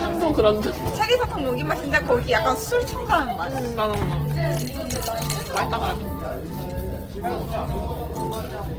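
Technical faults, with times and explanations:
Throughout, Opus compression, likely: tonal parts turn grainy and rough as starved bands are refilled with folded or noise-like energy, consistent with a low bitrate near 16 kbps in CELT mode. A spectrogram shows few holes but a speckled, noisy texture up to about 20.3 kHz.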